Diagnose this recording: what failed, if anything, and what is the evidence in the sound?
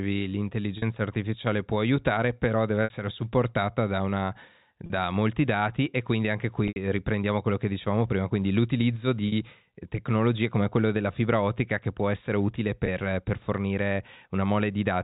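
Packet loss with pitch repetition at the network stage, six times: 0.78 s (40 ms), 2.84 s (60 ms), 4.86 s after "supportata da una" (40 ms), 6.68 s after "dati e quindi anche" (80 ms), 9.28 s (40 ms), and 12.86 s before "per fornire" (20 ms). Each gap is filled by repeating the last pitch period, so in the shorter gaps the speech briefly holds on a buzzy sustained tone, while the 60 and 80 ms losses fade into silence before the speech returns. The 20 ms steps fit 20 ms packets, and the band-limited G.711 telephone sound carries through the gaps.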